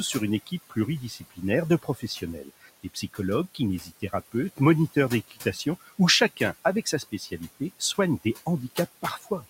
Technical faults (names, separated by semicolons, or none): noise suppressor artifacts; speech cut by the noise suppressor